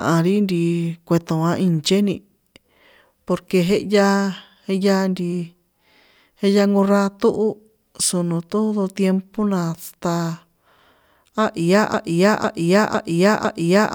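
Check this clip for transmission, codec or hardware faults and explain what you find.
One fault is present: a broken-record loop from 11.94 s that runs to the end of the clip at 13.94 s. A fragment of the speech about 0.5 s long plays four times back to back with no change, and the speech that should follow never arrives. The likely cause is a stalled player, encoder or stream re-sending the last buffer it held. Unlike an echo, the repeats do not fade or overlap. Each copy is identical and fills the gap completely.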